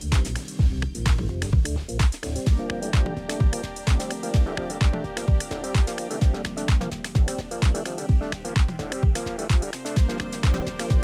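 At 10.54 to 10.62 s, near the end, there is a brief jumbled moment: chunks out of order. A 20 ms chunk of audio arrived late and plays three chunks after where it belongs, so the 80 ms span comes out shuffled. Nothing is lost, but the displaced chunk creates three hard joins where unrelated waveforms meet within that short garbled stretch.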